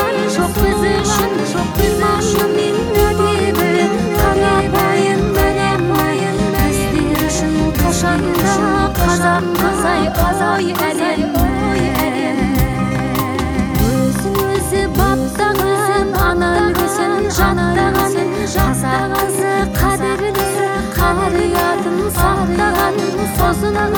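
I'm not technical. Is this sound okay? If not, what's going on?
No. The whole clip has a doubled audio track: a second copy of the same sound plays about a second behind the original, a bit quieter, with no fading tail. This likely comes from the audio being captured twice, once through a slower path.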